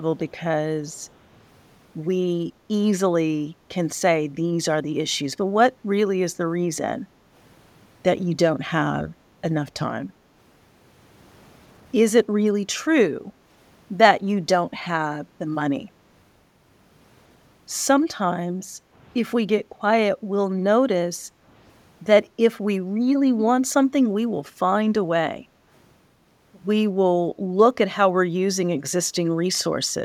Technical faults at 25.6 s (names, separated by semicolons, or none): background gated by the echo canceller